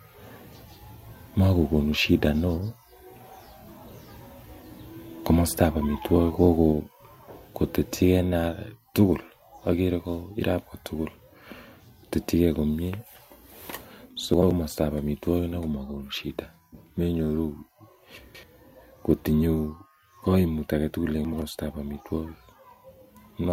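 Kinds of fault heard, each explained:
Microphone volume stepped down: the speech drops suddenly in level three times, by about 3 dB, then about 2 dB, then about 1 dB, near 6.7, 8.5 and 10.0 s, likely the call software lowering the microphone's input volume in steps after judging it too loud.
Chunks out of order: brief jumbled moments at 14.34, 18.18 and 21.25 s, where blocks of about 85 ms play late, one chunk late twice and two chunks late once, so the sound arrives in the wrong order with hard joins.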